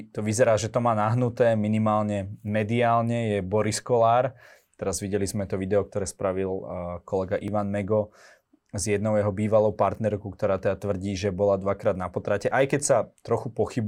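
At 7.48 s the speech jumps forward. The likely cause is a dropped buffer (overrun): the samples weren't read out before the hardware overwrote them, so a sliver of audio, about 1.5 milliseconds, vanished and the surrounding material was spliced together directly. There's no gap of silence. On a waveform this shows as an abrupt step where the wave doesn't line up, and on a spectrogram as a thin vertical broadband line.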